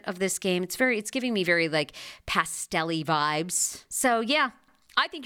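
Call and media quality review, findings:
Nothing to flag on this speech recording; no faults turned up anywhere, so there's nothing here for the ticket.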